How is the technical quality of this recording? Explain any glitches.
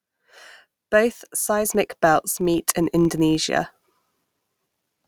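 The recording has two glitches, one running the whole way through and one sudden level jump.

Throughout, there's a filter restarted on every block. The filter drops its memory at each block boundary and starts cold, so every block opens with a tiny click. They repeat at about 46.9 Hz, which fits 1024-sample blocks at 48 kHz, making a low buzz that gets louder when the speech does.

At 1.65 s, the microphone volume stepped up by about 4 dB in a single jump. The call software judged the input too quiet and raised the device gain all at once, so the speech and the background noise both get louder together.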